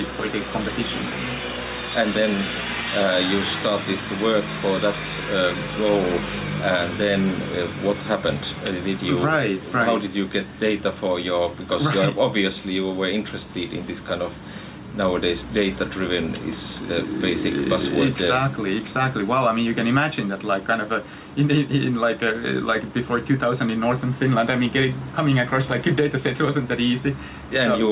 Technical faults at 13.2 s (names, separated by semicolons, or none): gain pumping